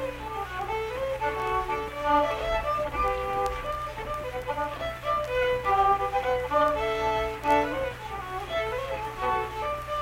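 No technical faults can be heard in this clip.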